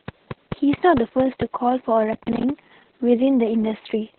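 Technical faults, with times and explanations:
Throughout: Opus voice compression. The speech is coded by Opus in SILK mode at 6 kbps, narrowband, with nothing above about 4.3 kHz. The excitation is coded coarsely in long frames. The voice sounds muffled, hoarse and slightly robotic. The damage is heavy.
2.13–2.50 s: processor overload crackle. For about 0.4 s the processor misses buffer after buffer, which fits buffers of around 10 ms. Roughly twenty misses each leave a short gap of silence with hard edges. Together they make a gritty burst of crackle.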